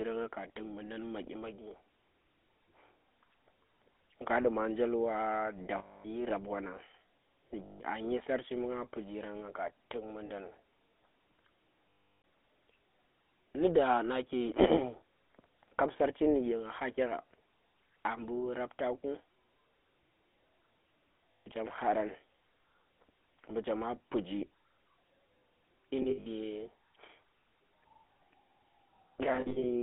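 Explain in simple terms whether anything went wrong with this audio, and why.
The whole recording has passed through the GSM full-rate codec, the original mobile-phone voice compressor. It rebuilds speech from a rough model fed by regular pulses, leaving a buzzy, gravelly grain and nothing above 4 kHz. A plain phone line would sound muffled but smooth rather than rough.

There are also lost GSM frames. Where chunks of the signal went missing, the phone kept repeating the last good sound while fading it, producing a metallic ring instead of a clean gap or click. This happens at 5.78–6.06 s, right after "duma njel wa da"; at 7.64–7.82 s, before "a dyi sarchi bu"; at 10.26–10.31 s, after "pijarang nga ka tuk"; at 11.90–12.24 s; and at 21.35–21.48 s. At 26.02–26.27 s and 29.36–29.65 s the losses come in short scattered bursts.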